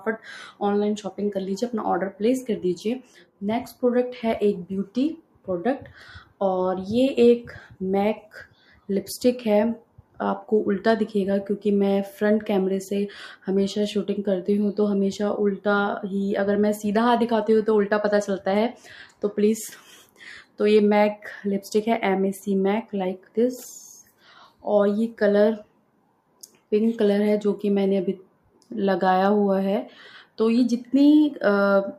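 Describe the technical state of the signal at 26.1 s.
At 26.1 s you're inside a stretch, from 25.64 to 26.65 s, where the sound is cut by the noise suppressor. It mistakes the sustained material for noise and pulls it down by up to about 12 dB, so held parts and decays sink and get clipped short for roughly 0.7 s in all.

That sits on top of a noise suppressor applied to music or sounds across the whole clip. A speech-tuned suppressor keeps treating tones, ambience and tails as noise, so the level swings by around 5 dB, with attacks getting through and the sustain pumping and thinning behind them.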